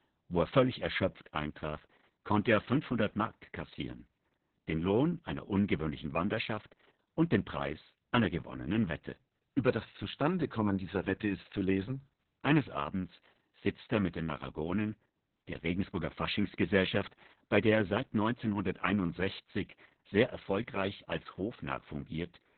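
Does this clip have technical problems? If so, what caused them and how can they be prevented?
Yes. Throughout, the speech sounds muffled, hoarse and slightly robotic, with nothing above about 4.3 kHz. This is Opus voice compression in narrowband SILK mode with heavily coarsened excitation, which fits a very low bitrate near 6 kbps. Encoding at a higher bitrate with wideband or fullband enabled prevents it.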